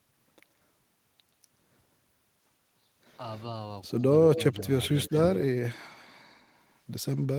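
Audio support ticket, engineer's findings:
Echo leak, 4.35 to 4.61 s and 4.95 to 5.19 s: delayed copy of the speech trailing by about 130 ms. First burst fairly strong, second just a faint scrap. Likely the far end's echo canceller on speakerphone letting loudspeaker pickup back through the mic.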